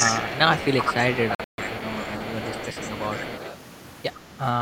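From the very start to 0.21 s the speech dips by roughly 15 dB across about a fifth of a second. That is speech suppressed in double talk, likely an echo canceller that could not tell the near talker from loudspeaker echo while both sides spoke and so turned everything down. On a spectrogram the harmonics fade and the top end goes dark; the waveform envelope shows a notch before recovering.

Running underneath from 0.0 s to 3.55 s is an echo leak: a faint copy of the speech trailing it by 107 ms, around 25 dB below the direct sound. It is likely residual echo from a loudspeaker-side canceller that didn't fully clear what its microphone caught and sent it back. Heard as a doubling of the voice, it shows on a spectrogram as a weak duplicate of each syllable's energy shifted right by about a tenth of a second.

Between 1.35 s and 1.59 s the sound breaks into silent holes totalling about 186 ms, scattered over 232 ms, the longest 139 ms. 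This is a Bluetooth dropout, likely packets that missed their deadline to the headphones. Speech resumes as if it had played on. The waveform shows silent gaps, and the spectrogram shows vertical blank bands.

The echo leak returns briefly from 4.15 s to 4.19 s, again 107 ms late but much fainter, about 40 dB down.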